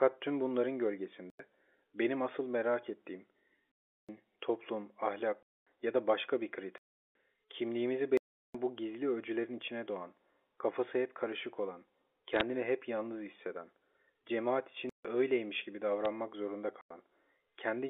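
The speech drops into blocks of digital silence at 1.30 s (93 ms), 3.72 s (372 ms), 5.43 s (239 ms), 6.78 s (372 ms), 8.17 s (372 ms), 14.89 s (152 ms) and 16.81 s (93 ms). The output buffer likely went unfilled, so samples became zeros. Several of the lengths point to 4096- and 16384-sample blocks. Each gap starts and ends abruptly. On the waveform these are flat near-silent lines with hard edges, and on the spectrogram they are blank vertical strips with a broadband line at each boundary.

Bit errors on a digital phone line crackle from 12.35 to 12.41 s and tick at 16.05 s. Flipped bits in the G.711 stream corrupt individual samples at a small fraction of a percent. These show as isolated needle spikes on the waveform and thin full-height streaks on the spectrogram, over speech that stays band-limited to telephone width.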